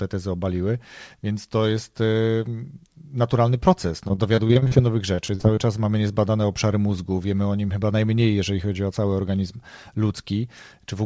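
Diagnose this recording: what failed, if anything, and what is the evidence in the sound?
Repeated packet loss (robotic sound) at the network stage. From 4.08 to 4.73 s, after "naturalny proces", eight short gaps turn the speech choppy. From 5.15 to 5.59 s, before "czas mamy niezbadane obszary", five more follow. Gaps reach 41 ms. Concealment stretches the last sound over each hole.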